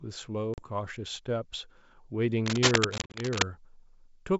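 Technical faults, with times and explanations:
0.54–0.63 s, packet loss on an ADPCM call: about 40 ms of audio, roughly two packets, was dropped and filled with silence. The receiving decoder's predictor and step size lost track of the sender's, so after the hard-edged gap the speech comes back slightly distorted before settling.
2.46–3.42 s, cable scratch noise: a rapidly changing contact resistance, likely from a worn cable or connector being moved, injects dense, irregular bursts of noise at about the same level as the speech, heard as a scratchy rustle lasting nearly a second.
2.98–3.21 s, packet loss on an ADPCM call: about 100 ms, roughly five packets, went missing scattered over 160 ms, the longest single hole 40 ms. Each silent gap knocks the decoder's adaptation out of step, giving a stuttering run of dropouts with slightly distorted returns under the scratching.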